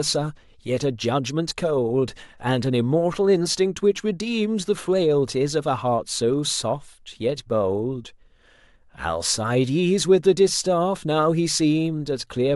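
Speech, with nothing technically wrong with it.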